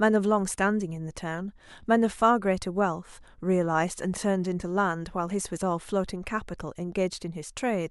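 No technical faults can be heard at any point in the speech, so there is nothing to place in time order.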